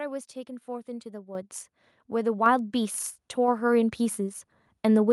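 A speech recording with two microphone volume stepped up events: at 1.35 s the level jumps by about 9 dB, and at 2.46 s by about 4 dB more. Voice and background noise rise together each time, as automatic gain control raises the device's input volume in single steps.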